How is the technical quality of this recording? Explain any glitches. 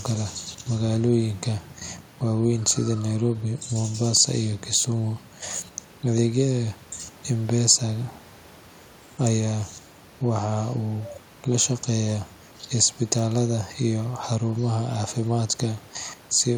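No technical faults are audible.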